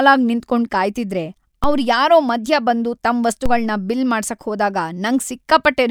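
A DC step occurs at 1.64 s and again at 3.46 s in this speech clip. Each time the waveform's zero line jumps by about -10 dBFS, producing a low thump, and the offset then decays through roughly a 2 Hz high-pass while the speech continues unchanged.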